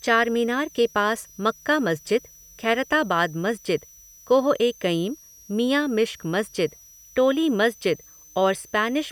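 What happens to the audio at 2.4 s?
A thin, high whistle sits under the speech at 2.4 s, as it does throughout the clip, wandering between 5.74 and 6.18 kHz roughly 30 dB below the speech. This is switching supply whistle: a switching power supply drops into an audible burst mode or beats with another supply, and its pitch drifts as the load changes.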